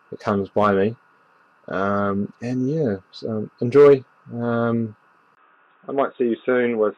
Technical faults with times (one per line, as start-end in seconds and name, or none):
5.35-6.97 input switched to a poorer device